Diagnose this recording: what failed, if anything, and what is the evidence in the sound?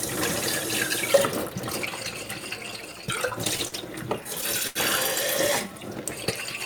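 The network delivered packets late, so the receiver's jitter buffer repeatedly ran dry, producing repeated stalls (stutter) in two bursts. From 2.71 to 3.74 s the sound hitches seven times, about 100 ms concealed in all, none longer than 40 ms. From 4.24 to 4.77 s four stalls fill 112 ms, the longest 82 ms, and that one fades. Each time the receiver stretched the last sound until data arrived, so nothing is lost, but the sound drags and stutters.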